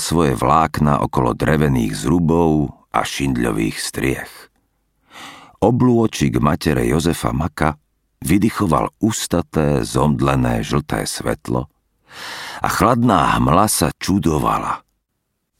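Nothing in this one trips any alarm; there's no fault to point to anywhere along the way.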